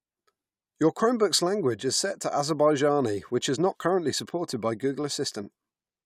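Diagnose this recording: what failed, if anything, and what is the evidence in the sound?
Nothing failed: no stage in the chain leaves an audible fault anywhere in this speech recording.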